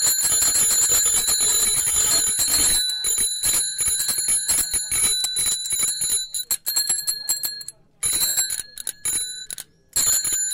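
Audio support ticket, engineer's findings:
Lost LE Audio frames at 1.73–1.96 s, 3.35–3.41 s, 6.35–6.39 s, 8.28–8.37 s and 9.99–10.17 s. LC3 concealment repeats the last spectrum with random signs, so tones smear into noise. The first and last events are scattered dropouts rather than one gap (runs of about 20 ms), not a codec artefact. Gaps of 37.5–112.5 ms fit 7.5 ms frames.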